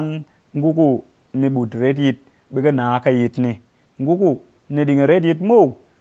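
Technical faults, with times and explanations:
No technical faults are present: the speech carries the band limit of a call's microphone processing, with nothing above 8 kHz, and the room's background noise sits about 43 dB below the speech.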